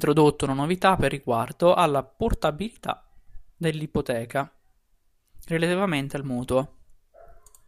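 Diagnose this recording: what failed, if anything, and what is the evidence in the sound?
Nothing failed: no stage of the chain, from wiring through to playback, leaves any evidence of a fault in this speech recording.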